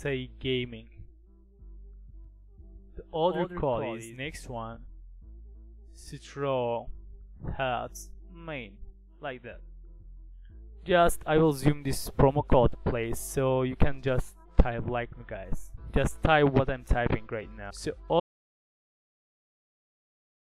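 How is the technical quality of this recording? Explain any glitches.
Two faults affect the recording: a brief doubled audio track early on and a dropout that silences the ending.

From 2.24 to 4.16 s there is a doubled audio track, likely from a second, slower capture path or an out-of-step edit layering two copies. A full-band copy trails roughly 150 ms behind, about 10 dB quieter, with no room colour, and it switches on and off abruptly.

At 18.2 s an audio dropout to silence begins and lasts to the end, likely because the input was lost while recording continued writing silence. The sound cuts off mid-flow into silence with no room tone, and nothing after that point is recoverable.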